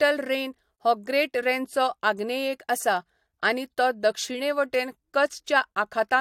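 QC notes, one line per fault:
No fault found; there is nothing to note.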